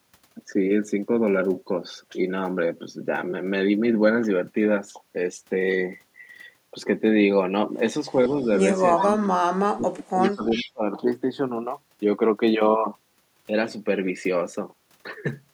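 A speech recording with two related call-path faults, both clustered between 8.3 and 10.8 s. Echo leak appears three times, each a copy of the far-end talk delayed by 379 ms: very faint at 8.28 to 8.57 s (about 35 dB below the speech), nearly as loud as the speech at 8.97 to 9.02 s (about 5 dB down), and clearly audible at 10.21 to 10.71 s (about 10 dB down). The likely cause is a loudspeaker-side echo canceller failing to fully subtract what its microphone picked up, so the residual is transmitted back. From 8.95 to 10.83 s, speech is suppressed in double talk. The talker's level drops in pieces, at its deepest by around 40 dB, and the dips add up to roughly a second and a half. This happens while the other side is also talking, and the overlap with the two louder echo bursts fits that picture. The likely cause is the echo canceller's suppressor treating the simultaneous near-end speech as echo and attenuating both.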